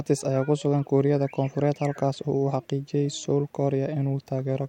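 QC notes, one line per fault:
Nothing to flag here; the speech comes through without any technical problems worth a line.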